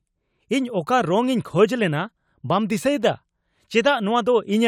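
No technical faults are audible anywhere in this speech recording.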